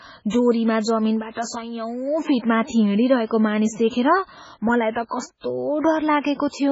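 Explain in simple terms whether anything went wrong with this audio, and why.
MP3 compression is audible throughout the speech, and it sounds heavy. The sound is watery and swirly, and nothing is left above about 7.7 kHz, so the crisp top end is gone. This likely comes from an MP3 encoder working with very little data. It keeps only the parts a hearing model judges most important, drops quieter details, and lets them flicker on and off from moment to moment while it cuts off the treble entirely.

Pre-echo appears twice: at 4.91 to 4.96 s, spreading about 54 ms ahead of a sharp sound, and at 6.20 to 6.24 s, spreading about 44 ms. Just before each attack there is a short hiss, and the attack itself sounds softened. The codec treats audio in blocks and spreads its noise evenly across each one. When a sudden loud moment sits late in a block, that noise also fills the quiet stretch just before it.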